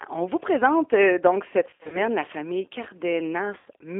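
From start to end the speech carries G.729 codec damage, clearly audible. The sound is confined to a band of roughly 300 Hz to 3.5 kHz, and within it the voice has a rough, slightly synthetic grain. That grain comes from the decoder rebuilding each 10 ms frame from a filter shape, a pitch predictor and a handful of pulses, which fits an 8 kbit/s G.729A coder. A plain telephone band limit would sound dull but smooth. The rasp here is what marks it as a parametric speech codec.

Between 1.70 s and 2.00 s, VoIP packet loss concealed by the speech codec breaks up the speech. About 160 ms of audio is missing, scattered across 220 ms, and the longest unbroken gap runs about 60 ms. Each time, the decoder repeats its last pitch and filter at falling gain, so the voice smears into a buzzy tone or coloured noise that fades, and stays weak for a moment after real frames resume. This is not silence or clicks, which would point to plain dropouts rather than concealment.

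A second, shorter concealed loss of about 70 ms occurs from 3.59 s to 3.67 s. It produces the same brief stretched sound and fade, followed by a weak or distorted recovery.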